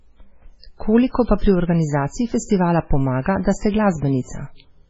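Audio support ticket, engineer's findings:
MP3 compression, throughout: treble gone above 7.7 kHz, heavy watery swirl on speech, smeared attacks. Likely an MP3 encoder starved of bits, consistent with a very low bitrate near 16 kbps.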